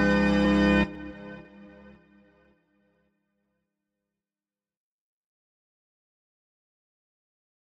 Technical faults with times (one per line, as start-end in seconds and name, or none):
0.45-7.44 periodic USB or driver dropouts